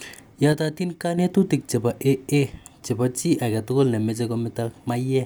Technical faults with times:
0.53-1.18 one channel drops out

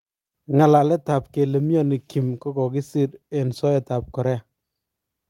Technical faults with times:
none

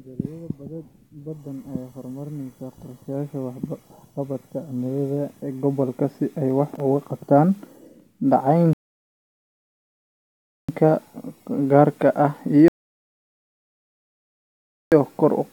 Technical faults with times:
8.73-10.69 rebuffering stall
12.68-14.92 rebuffering stall

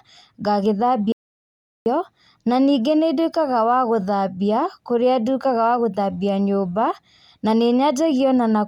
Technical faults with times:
1.12-1.86 audio dropout to silence

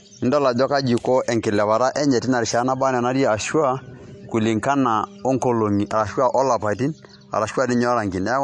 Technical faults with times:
0.00-8.44 MP3 compression

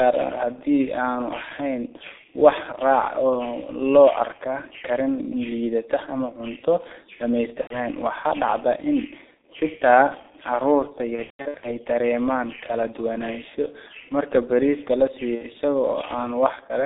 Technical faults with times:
0.00-16.86 G.723.1 codec
7.61-7.85 VoIP packet loss concealed by the speech codec
11.15-11.68 VoIP packet loss concealed by the speech codec
15.35-15.44 VoIP packet loss concealed by the speech codec

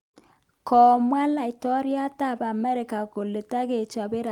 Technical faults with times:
none

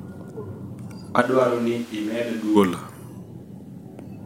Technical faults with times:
1.23-2.55 switch to a distant microphone

